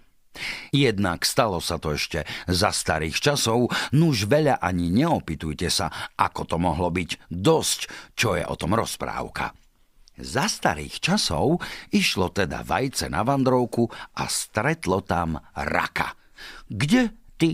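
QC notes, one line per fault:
Nothing stood out on listening to this speech recording.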